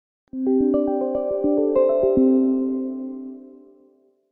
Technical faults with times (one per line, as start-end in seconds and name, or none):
none